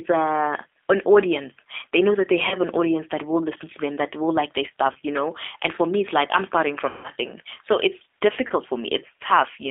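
Speech heard through a G.729 codec: the band spans only about 300 Hz to 3.6 kHz. Unlike plain band-limiting, the rough, synthetic texture comes from pulse-based rebuilding, which fits 8 kbit/s. VoIP packet loss concealed by the speech codec occurs at 2.49–2.57 s (after "know that they", before "an audience that will"), 4.92–4.96 s, 6.89–7.10 s (after "it's like I'm starting") and 8.47–8.52 s (after "so it's"). Rather than silent gaps, the decoder stretches the preceding sound into a fading buzz or coloured noise. The longest is at 6.89 s, which fits about five lost 30 ms packets.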